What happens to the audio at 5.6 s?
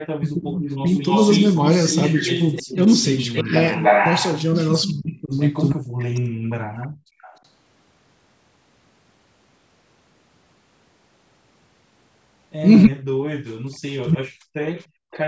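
Echo leak runs from 0.67 s to 7.37 s, so it is present at 5.6 s. A delayed copy of the sound returns about 301 ms behind the original, roughly 10 dB quieter. The likely cause is a far-end loudspeaker whose echo canceller failed to remove everything its microphone picked up, so the leftover was sent back down the line.

Speech suppressed in double talk overlaps it, from 3.42 s to 6.65 s. The voice on the loudspeaker side is turned down, falling by as much as about 40 dB at its deepest, with roughly a second and a half affected across the span. Both sides are likely talking at once, and the echo canceller, unable to separate its own talker from the returning echo, turns both down.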